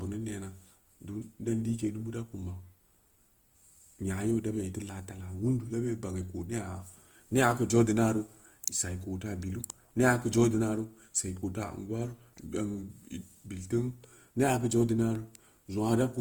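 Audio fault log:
throughout Opus compression: the speech sounds rough and grainy, tones turning noisy rather than swirling as MP3 would, since weak bands are filled with folded or noise content; bandwidth stays full to about 20.2 kHz, fitting likely CELT-mode coding near 24 kbps.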